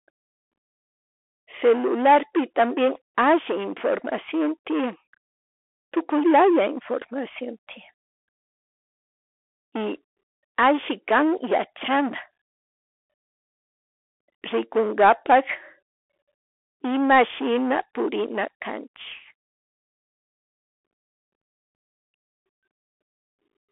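Bluetooth CVSD headset codec damage runs throughout: one-bit delta coding with adaptive step cuts everything above 3.8 kHz, scratching sibilants, distorting loud highs and leaving granular hiss.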